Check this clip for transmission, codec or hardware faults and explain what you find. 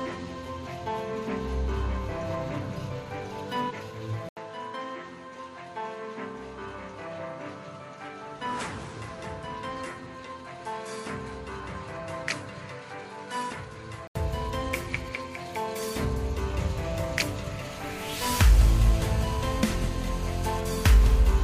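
Two faults are present.

Input switched to a poorer device, from 4.29 to 14.15 s. After an 80 ms gap, the sound turns dull and drops roughly 10 dB, with nothing above 11.4 kHz and new background noise about 30 dB down, likely from a change to a narrower-band microphone.

GSM phone buzz, from 18.47 to 20.60 s. A nearby 2G handset's 217 Hz transmit bursts are rectified by the audio circuitry, producing a hard, raspy, harmonic-rich buzz about 17 dB below the signal. It is nearly steady, as a phone is during a call.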